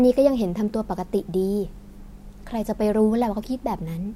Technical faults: clock slip clicks

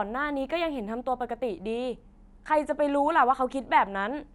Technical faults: imaging from linear upsampling

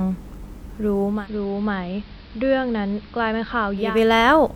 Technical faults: digital radio blending to analogue

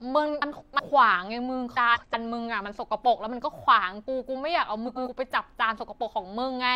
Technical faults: frames out of order

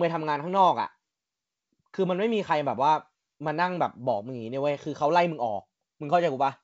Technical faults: none

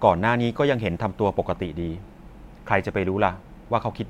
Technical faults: none

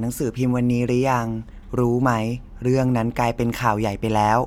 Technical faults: none

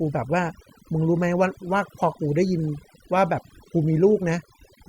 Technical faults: overdone noise removal

